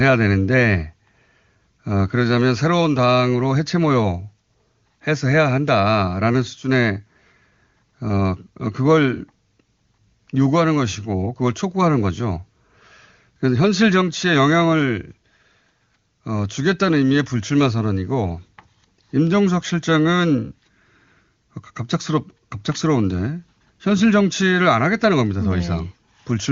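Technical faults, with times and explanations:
No technical faults are audible in this recording.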